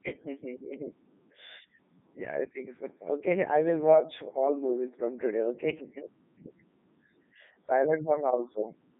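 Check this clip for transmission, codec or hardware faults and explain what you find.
The speech has been through a Codec 2 vocoder for its whole length, the top rate of 3.2 kbit/s. Codec 2 does not keep the waveform. It transmits only pitch, voicing, energy and a coarse spectral envelope, and the decoder rebuilds the voice from a bank of sine waves. The damage here is heavy: the voice comes out robotic and buzzy, confined to roughly 150 Hz to 3.7 kHz, with nothing at all above 3.8 kHz.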